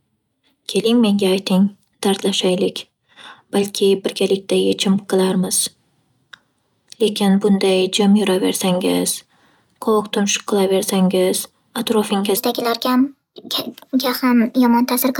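From 12.37 s to the end at 15.19 s, a section at the wrong speed runs 1.26 times fast, likely from being fitted to the wrong clock. The speech hurries and rises about four semitones at once, unlike a pitch shift, which keeps timing unchanged.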